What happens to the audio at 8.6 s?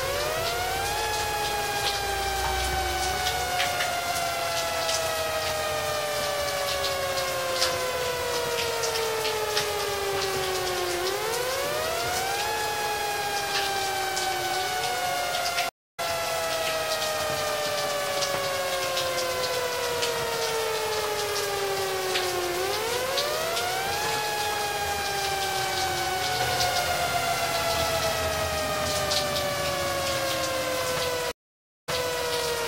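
Nothing goes wrong at 8.6 s; the sound continues there without any break, dropout or audible fault.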